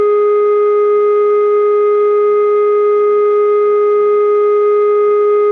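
Listening to the music, nothing stood out as a technical problem at any point.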